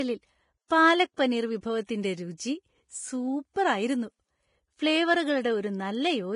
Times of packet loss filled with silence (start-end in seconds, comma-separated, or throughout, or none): none